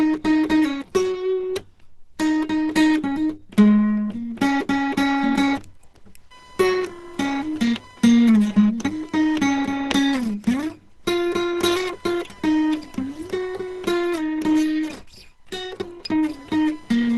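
The music has been squeezed through a low-rate codec, most likely Opus running in its hybrid speech-oriented mode at a rate that sounds close to 16 kbps. At that budget the encoder narrows the band and cannot spend enough bits to keep the music's detail, so nothing remains above about 12.1 kHz, the top end sounds dull, and the tones throughout come across muffled, hoarse and grainy, with plainly audible codec damage. From 3.63 s to the end, computer activity noise adds a second fault: load changes in the machine disturb the ground shared with the audio circuit, leaking a buzzing, chirping texture that pulses at roughly 1 kHz and sits around 30 dB below the music. It follows the computer's activity rather than the music, jumping up and dropping back underneath it once it begins.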